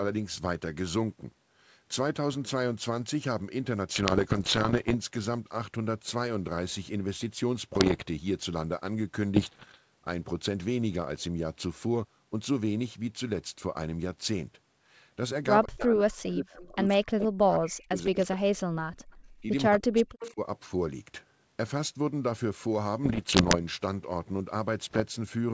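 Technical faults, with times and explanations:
3.94–4.96 s, 7.74–8.05 s, 9.36–9.78 s, 23.04–23.56 s and 24.84–25.05 s, bit errors on an ADPCM link: bits in the coded stream were corrupted, at a rate of roughly one to two percent, and each flipped bit threw the decoder's step size and predictor off track so the error kept sounding for some milliseconds. The result is clusters of pops and harsh, gritty bursts with brief jumps in level, set against the otherwise clean G.722 wideband band.
15.65–19.06 s, 19.42–19.49 s and 19.69–20.41 s, speech suppressed in double talk: the speech sinks, dulls and drops out in pieces, most heavily across the long first stretch and the 19.69–20.41 s stretch, where it falls by about 40 dB, while the brief dip at 19.42 s is only about 5 dB. The likely cause is an echo canceller that could not tell this talker apart from loudspeaker echo while both sides spoke, and so attenuated everything.
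16.29–16.33 s, 16.63–16.68 s and 20.20–20.31 s, echo leak: short scraps of a delayed copy of the speech, trailing the original by 167 ms, break through, at about 20 dB, 30 dB and 15 dB below the speech respectively. This is likely residual loudspeaker pickup that an echo canceller failed to remove and sent back down the line, which is why it arrives faint rather than as a full repeat.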